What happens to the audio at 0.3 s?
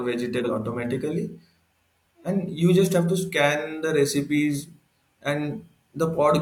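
From 0.32 to 0.5 s, compressed frames are skipped: the decoder drops roughly 150 ms of audio, so the speech lurches forward. The spectrogram shows an abrupt discontinuity at the join.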